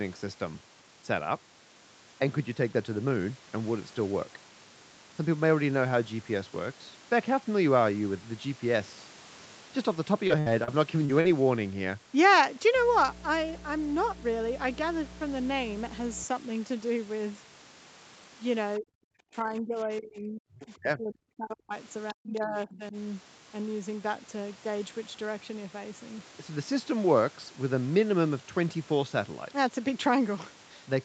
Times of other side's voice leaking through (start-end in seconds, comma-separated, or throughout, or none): 22.08-22.13, 22.44-22.77